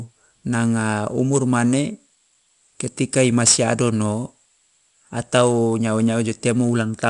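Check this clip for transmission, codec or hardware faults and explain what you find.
One codec fault runs through the whole clip: 4-bit ADPCM compression. The codec stores each speech sample as a coarse 4-bit step from a prediction, so the quantisation error rides on the signal as gritty hiss that swells with loud syllables and roughens sharp attacks. Nothing above 10.7 kHz remains, which fits a sample rate near 22 kHz and a stream of about 88 kbps.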